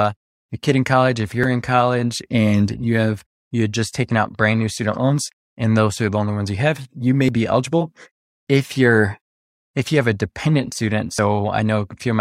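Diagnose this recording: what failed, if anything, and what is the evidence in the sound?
Audio missing between chunks at 1.44, 5.34, 7.29 and 11.19 s: the speech skips abruptly, with roughly 50 ms cut out and the two sides butted together. The gaps fall on a grid of about 2 s, likely a recorder or buffer stage dropping audio at each chunk handover.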